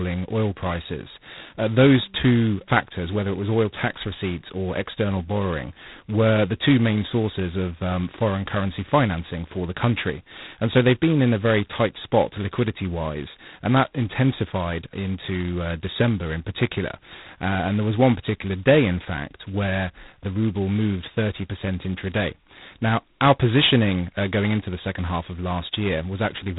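G.726 ADPCM damage runs throughout the speech: the harsh, rasping hiss rising and falling with the speech level suggests the 16 kbit/s rate, where each sample's difference from the adaptive prediction gets only two bits. Nothing passes above 3.9 kHz.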